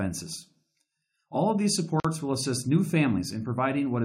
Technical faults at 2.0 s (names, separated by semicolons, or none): gap at a join of encoded pieces